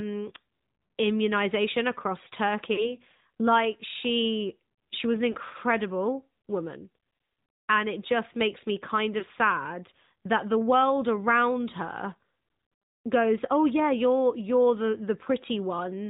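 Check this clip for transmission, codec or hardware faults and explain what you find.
Yes, two related faults are present: the whole clip is heard through a narrowband mobile speech codec, and three short stretches show lost speech frames.

AMR narrowband mobile codec: Throughout the 16-second clip, nothing reaches above 4 kHz, and the voice has a buzzy, synthetic edge. AMR-NB rebuilds speech from a vocal-tract model excited by a handful of pulses per subframe rather than storing the waveform, so the damage is plainly audible. The degree of buzziness fits a mid-rate mode around 10 kbps. A simple low-pass filter would only dull the top end; this codec also adds that pulsed, artificial texture.

Lost AMR speech frames: The first occurs from 2.74 to 2.95 s, right after "immunization across". The next runs from 5.32 to 5.36 s, after "she she was an". The last spans 9.20 to 9.24 s, between "just makes me kind" and "sad that the world". 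At each point the decoder lacked valid frames, so it repeated the last pitch and vocal-tract settings at falling gain. The sound briefly smears and dips rather than cutting to hard silence. The first gap fits two consecutive 20 ms frames, and the other two fit single frames. That concealed smear is what separates these from plain dropouts or clicks.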